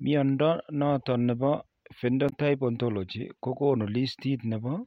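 At 2.29 s the speech breaks up briefly until about 2.33 s. This is damaged data in a compressed stream. For those few tens of milliseconds, the coded bytes the decoder receives are wrong. It cannot rebuild proper frames from them. It loses its place in the stream and must hunt for the next valid frame header. The garbled output in that gap comes out as a short glitch, not as speech.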